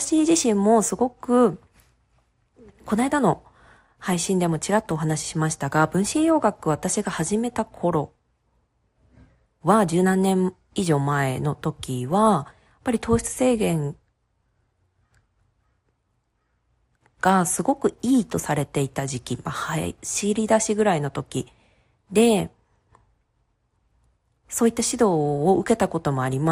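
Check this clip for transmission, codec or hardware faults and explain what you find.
One fault runs through the whole speech clip: MP2 compression damage, plainly audible from start to finish. The speech sounds dull and carries a gurgling, granular roughness. This is likely MPEG Layer II coding at a low bitrate, which fits about 80 kbps. Starved of bits, the codec switches off upper sub-bands, which then drop in and out, and coarsely quantises the bands that remain.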